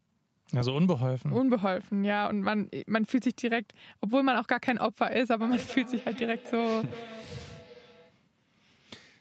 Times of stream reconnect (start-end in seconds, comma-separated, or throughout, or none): none